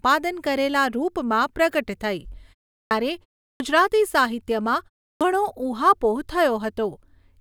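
At 2.81, 3.49 and 5.11 s, speech returns with a clipped start after a pause. After silences of 0.35, 0.32 and 0.30 s, the output path is slow to wake and swallows 99, 110 and 97 ms of each onset, so words begin abruptly.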